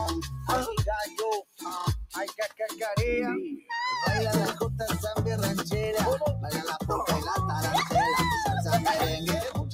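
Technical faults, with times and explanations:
throughout: noise suppressor applied to music or sounds. A speech-oriented suppressor keeps reading sustained parts of the sound as noise, so level swings by around 5 dB as it clamps and releases. Attacks pass while held parts and tails thin and flutter. The clip-wide pumping distinguishes this from isolated dropouts.
1.42–1.65 s and 2.07–2.78 s: sound cut by the noise suppressor. In these two stretches the suppressor judged the sound as noise and pushed it down by about 17 dB, then about 19 dB. Roughly 0.2 s and 0.4 s were affected, with sustained or decaying parts sinking while any sudden onsets survive. That deeper, localized loss sets these apart from the general pumping.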